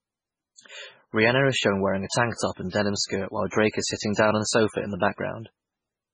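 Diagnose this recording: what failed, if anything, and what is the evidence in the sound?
The failure sits at the codec stage and runs through the whole speech recording. The audio has a heavy watery, swirling texture, with metallic chirps on s sounds and smeared attacks. On a spectrogram there is a flat ceiling with nothing above 10 kHz, and the weaker bands below it break into blocky patches that flicker on and off between frames. This is likely MP3 compression at a very low bitrate, which fits about 16 kbps. The starved encoder drops quiet frequency lines and cuts the treble.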